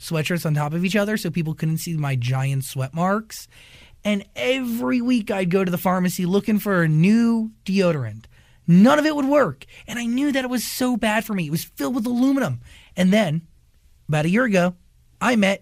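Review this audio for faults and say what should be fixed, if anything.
DAB burbling occurs at 11.11 s, between "that it was so" and "for me". Uncorrected bit errors in the MP2 stream corrupt sub-band samples and scale factors, giving a few brief watery blips. This fits a few damaged frames and a residual bit error rate of a small fraction of a percent. To prevent it, improve reception margin with better antenna placement or signal strength, or take the feed from a cleaner source than weak off-air DAB.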